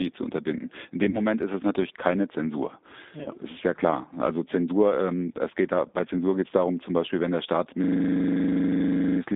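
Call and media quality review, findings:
G.729 codec throughout: band-limited to roughly 200 Hz–3.7 kHz, nothing above 4 kHz, slightly rough and synthetic. It's an 8 kbit/s CELP build, filter plus pitch predictor plus sparse pulses, so the damage is plainly audible.

VoIP packet loss concealed by the speech codec at 1.10–1.19 s, just before "ist es natürlich keine", and at 3.23–3.28 s: a brief fading smear each time. One 30 ms packet gone; the decoder extrapolated its last pitch and filter, and recovery lags.

System hang loop at 7.84–9.2 s: a steady 25 Hz buzz, one 40 ms slice repeating about 34 times. It fits a 40 ms ring buffer cycling while the host froze, with little or nothing actually skipped.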